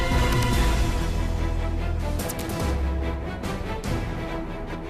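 A brief glitch breaks into the sound from about 4.74 to 4.76 s, right at the end of the roughly 5-second clip, lasting only a couple of hundredths of a second. That glitch is damaged data in a compressed stream: some of the encoded bytes at that point are corrupt or missing, so the decoder misreads the affected frame and loses its place in the bitstream until it locks onto the next valid frame header.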